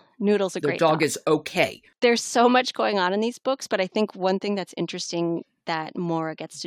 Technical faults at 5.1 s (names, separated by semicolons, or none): none